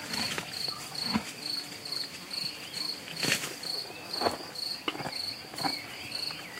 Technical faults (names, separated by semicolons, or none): none